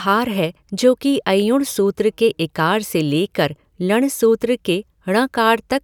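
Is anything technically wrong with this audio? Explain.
No, there's nothing technically wrong to point to here; it's just a short stretch of speech with no faults to report.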